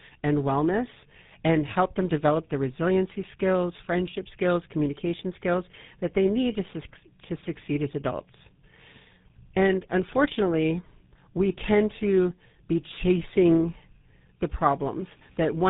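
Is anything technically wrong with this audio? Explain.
Yes. Tandem speech coding affects the whole clip. The speech sounds like it went through two GSM full rate codecs in a row, decoded and re-encoded at each border. The second coder works on the first one's damage. Nothing remains above 3.8 kHz, and the speech sounds rough, muffled and warbly.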